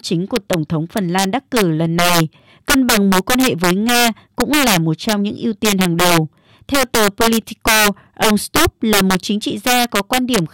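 Integer overflow runs throughout the speech: peaks driven about 10 dB too hot wrap to the opposite sign, giving violent cracks, sudden waveform sign flips and broadband vertical spectrogram streaks on loud syllables.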